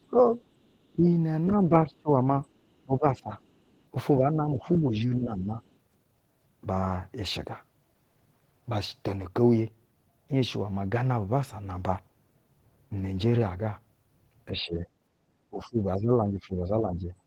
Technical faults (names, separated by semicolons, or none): speech suppressed in double talk; other side's voice leaking through